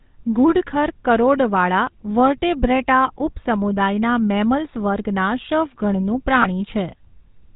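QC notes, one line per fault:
throughout: GSM full-rate codec. A plainly audible buzzy, gravelly roughness with nothing above 4 kHz, because a pulse-driven vocal-tract model replaces the speech, consistent with 13 kbps full-rate GSM.
6.42 to 6.46 s: lost GSM frames. A brief rough, metallic ring, because 20 ms of missing speech, consistent with one bad frame, was filled by repeating the previous frame's settings.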